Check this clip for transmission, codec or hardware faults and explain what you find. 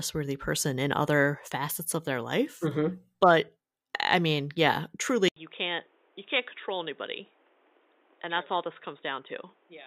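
One fault is present. From 5.28 s, right after "I mean yeah", an 80 ms gap leads into sound with nothing above 3.8 kHz, a level about 10 dB lower and a new noise floor roughly 30 dB down, likely an input switched to a poorer device. The dull, boxy tone persists to the end.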